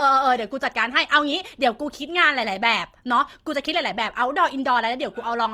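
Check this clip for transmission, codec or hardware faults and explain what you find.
There's one fault, and it runs through the whole recording: Opus compression damage that's plainly audible. The speech keeps its full bandwidth, but voiced parts sound rough and grainy, with a noisy fizz where fine detail should be. That's likely Opus in its music mode running short of bits and filling starved bands with copied or noise content, which fits a low rate of around 24 kbps.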